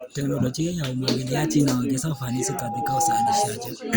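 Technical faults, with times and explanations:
2.13 to 3.50 s, loudspeaker feedback squeal: a steady tone at 813 Hz appears under the speech and swells over roughly a second until it sits about 5 dB above the speech level, then stops. The microphone is picking up the loudspeaker it feeds, and at 813 Hz the loop gain exceeds one, so each pass around the loop reinforces that single frequency until it dominates and becomes a squeal.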